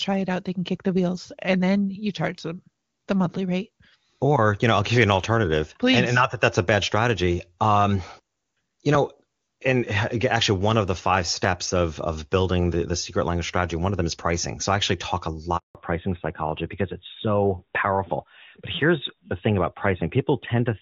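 At 15.57 s the speech cuts out abruptly, fading to nothing within a few tens of milliseconds, and stays silent until 15.75 s, a hole of 180 ms in which anything said is simply gone. This is a handover gap: the call was being passed from one network to another, and during the switch no speech frames reached the receiver, so there was nothing to decode until the new link came up.

When the sound resumes at 15.75 s it is duller and rougher, with the airy top end missing, and it stays that way to the end of the clip. Nothing above 4 kHz remains. That is a fallback to narrowband. Before the gap the call ran in HD Voice, with clean wideband detail consistent with AMR-WB at a high rate such as 23.85 kbit/s. After the handover it was renegotiated onto an older narrowband codec, most plausibly AMR-NB at 12.2 kbit/s, which cannot carry anything above 4 kHz.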